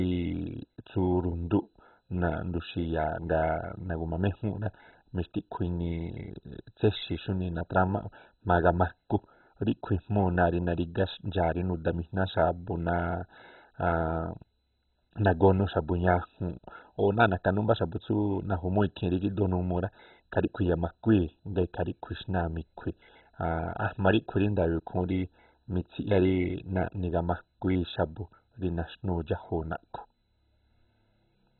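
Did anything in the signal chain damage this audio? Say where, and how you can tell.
Yes, the damage is at the codec stage, most likely MP2 compression run at a starved bitrate. Throughout the speech there is nothing above about 4.1 kHz, and the remaining band carries a gurgling, granular roughness, which fits a very low rate such as 16 kbps. With so few bits, Layer II switches off its upper sub-bands entirely, leaving the speech dull, and quantises the lower bands coarsely, while bands flicker on and off as the bits are shared out.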